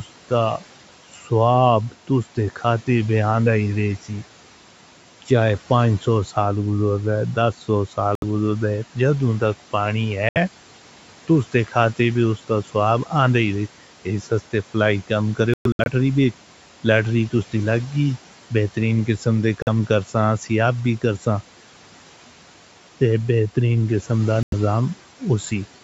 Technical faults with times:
1.14-1.31 speech cut by the noise suppressor
8.15-8.24 Bluetooth dropout
10.29-10.37 Bluetooth dropout
15.54-15.88 Bluetooth dropout
19.62-19.69 Bluetooth dropout
24.43-24.54 Bluetooth dropout

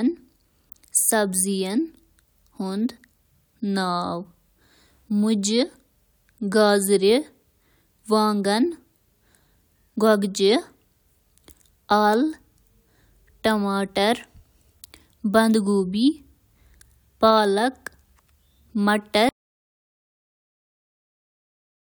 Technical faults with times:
19.29-21.82 audio dropout to silence

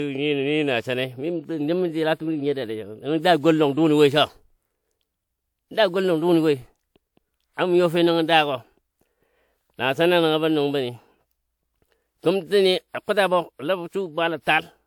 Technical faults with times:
0.00-14.87 generation loss

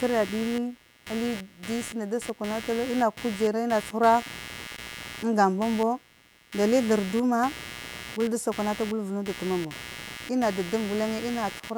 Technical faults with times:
0.00-11.77 computer activity noise

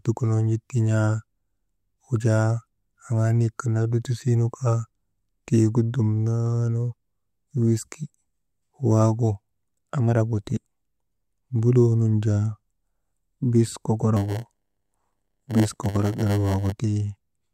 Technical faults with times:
14.16-16.72 block size mismatch (padded)

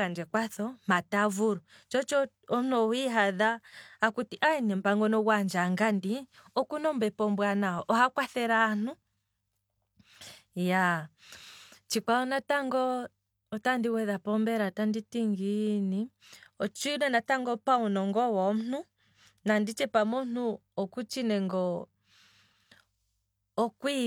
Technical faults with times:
none

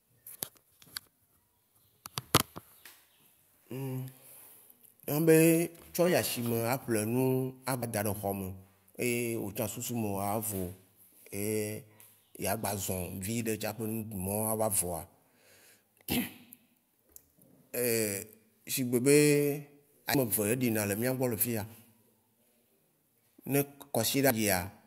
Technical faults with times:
7.82-7.85 damaged data in a compressed stream
20.14-20.17 damaged data in a compressed stream
24.30-24.33 damaged data in a compressed stream

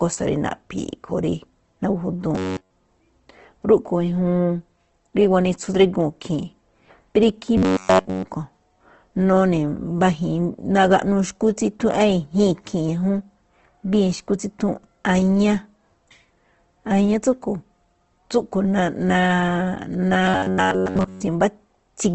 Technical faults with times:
0.00-22.14 Opus compression
2.35-2.71 robotic sound from repeated short buffers
7.57-8.24 robotic sound from repeated short buffers
20.24-21.21 robotic sound from repeated short buffers

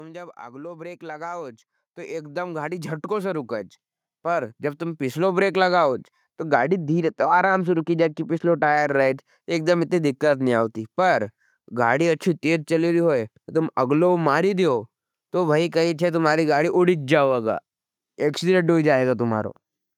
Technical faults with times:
0.37-5.52 automatic gain rising
6.56-8.77 de-emphasis applied wrongly

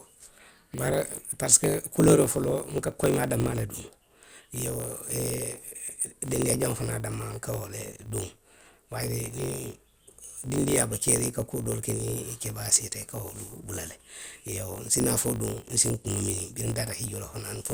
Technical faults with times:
0.00-17.73 block size mismatch (truncated)

